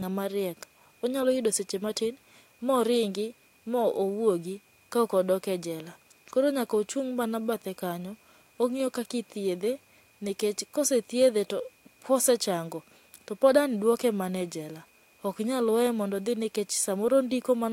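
No technical faults turn up anywhere in this speech recording, so there's nothing here to flag.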